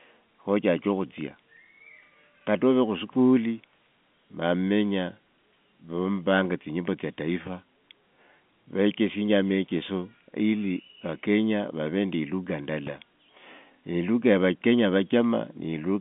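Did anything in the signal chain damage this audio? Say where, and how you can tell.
No, nothing in the chain stood out as damaging on listening, with the speech carrying the narrow band of an ordinary telephone line that stops short of about 3.7 kHz, which fits normal G.711 telephone coding.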